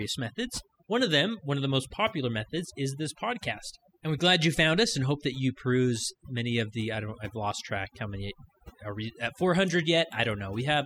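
From start to finish, the gaps between phrases drop to near silence dotted with twinkling specks, while the voice's softer parts and trailing edges seem to dissolve. This is overdone noise removal: a noise reduction stage set far too aggressively has pulled individual frequency bands down or off wherever they came close to its noise estimate, stripping out low-level parts of the speech along with the background noise.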